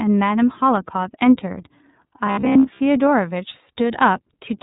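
The iLBC codec colours this speech clip from start to finish: with nothing above 4 kHz it sounds plainly narrowband, and the rough, slightly synthetic texture comes from each 30 ms frame being coded on its own, which fits the 13.33 kbps mode. Robotic sound from repeated short buffers appears from 2.27 to 2.81 s as a rigid metallic buzz at 66.7 Hz. This is likely caused by a roughly 15 ms chunk being replayed while fresh audio failed to arrive, so most of that stretch is repetition rather than real signal.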